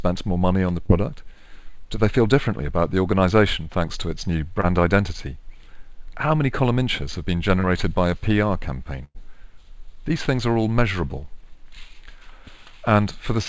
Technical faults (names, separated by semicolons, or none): short concealed packet loss; burst of packet loss